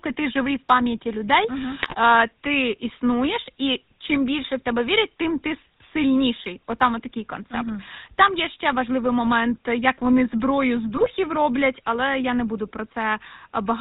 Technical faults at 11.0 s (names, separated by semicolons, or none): GSM full-rate codec; GSM bit errors